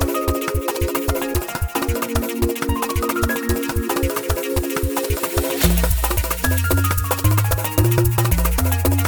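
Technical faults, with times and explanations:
Throughout: audio read two samples at a time (double speed), running twice as fast and 12 semitones higher, because sample pairs were taken as single frames.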